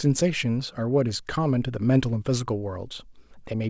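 No faults; the speech shows only the band limit of a wideband call path, with nothing above 8 kHz, which fits G.722.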